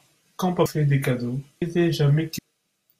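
Compressed frames skipped at 0.66 s, 1.62 s and 2.38 s. Each time, the speech lurches forward as whole blocks of encoded audio never reach the output. Roughly 400 ms goes missing just before "des cadeaux", and about 700 ms right after "des cadeaux" and again at 2.38 s. The gaps fit a 32 ms frame size.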